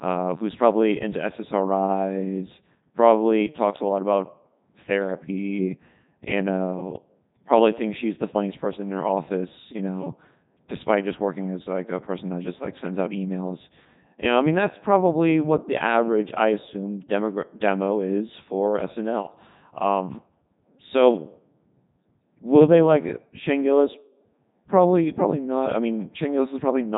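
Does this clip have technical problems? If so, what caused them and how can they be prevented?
Yes. Throughout the speech there is heavy Codec 2 vocoder damage: the voice sounds robotic and buzzy, which fits Codec 2's top 3.2 kbit/s mode. Only pitch, voicing, energy and a coarse spectral envelope survive, and the decoder rebuilds the voice from sine waves rather than the original waveform. Ordinary low-bitrate codecs smear or warble, but here everything has a uniform synthetic buzz. To prevent it, send the audio through a waveform codec such as Opus at a higher bitrate.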